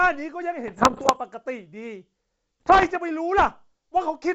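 Pops and gritty, rough bursts with brief jumps in level break through the speech from 0.68 to 1.17 s and again from 2.60 to 2.97 s. These are bit errors on an ADPCM link, here carrying G.722 wideband coding. The first stretch suggests about one to two percent of bits flipped, and the second about one percent. Each flipped bit throws off the decoder's step size and predictor, so the damage rings on for several milliseconds instead of staying a single click.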